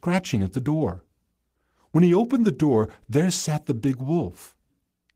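Nothing goes wrong anywhere in this speech recording; there's no technical fault to point to at any moment.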